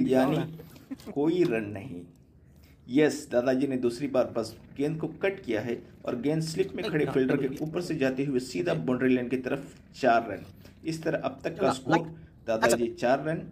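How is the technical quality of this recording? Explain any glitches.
No glitches or faults are audible.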